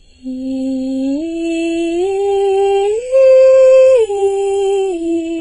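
Music, damaged throughout by what is likely AAC compression at a very low bitrate, around 16 kbps: the sound is dull and smeared, with warbling on sustained tones. A spectrogram shows a hard ceiling near 9.6 kHz.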